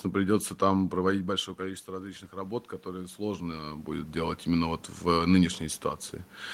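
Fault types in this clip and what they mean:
Automatic gain rising: the level control heard the input fall by about 13 dB just after "придется там" and pushed its gain up by about 6 dB, slowly, from 1.11 to 4.84 s. What separates it from a talker simply moving (which also happens around 1 and 3 s) is that the room noise swells together with the speech across those nearly four seconds, rather than the speech alone changing level.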